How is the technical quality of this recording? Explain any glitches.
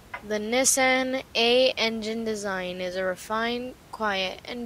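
No glitches; the system introduces no technical faults here.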